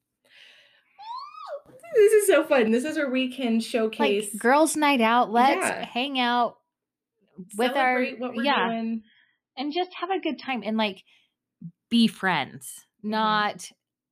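At 8.48 s the speech abruptly loses its top end and stays degraded until 10.48 s, just before "and like". This is an adaptive stream at a lower bitrate: the player switched to a far cheaper encoding for two seconds, then recovered. Nothing above about 5.6 kHz survives, sibilants turn dull and swirly, and coding artefacts thicken. The switch is instant with no gap, and the band-limiting suggests a drop from roughly 128 kbit/s MP3 to around 16 kbit/s.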